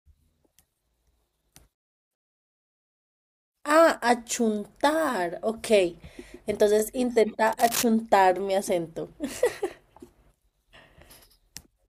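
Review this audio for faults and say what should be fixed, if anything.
At 6.80 to 6.82 s there is an overlapping chunks fault: the speech is handled in 4.0 s chunks, and at this join the new chunk begins before the previous one finished, so a 23 ms slice plays twice. It is heard as a brief click-like stutter. On a waveform, the same short stretch of cycles appears twice back to back with a small discontinuity; a spectrogram shows a thin vertical line at the seam. Chunk boundaries should be aligned exactly, with no overlap between consecutive blocks.

From 7.47 to 7.86 s a burst of scratching, rustling noise sits over the speech at about 10 dB below it. This is cable scratch noise, likely from a worn cable, connector or control being moved so that its contact resistance jumps rapidly. On a spectrogram it appears as dense, irregular broadband speckle across the frequency range for that 0.39 s. 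On the waveform it shows as jagged, uneven spikes riding on the speech. The faulty cable or connector should be replaced or cleaned and secured so it isn't disturbed during recording.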